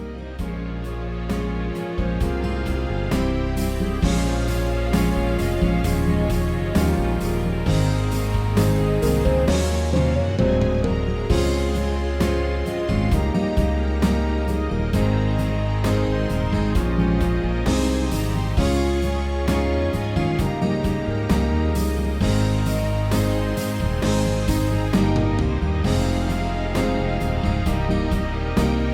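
No technical faults can be heard anywhere here.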